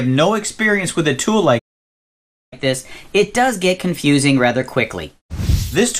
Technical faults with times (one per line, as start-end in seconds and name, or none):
0.00-6.00 MP2 compression
1.58-2.53 playback stall
2.53-5.53 catch-up at higher speed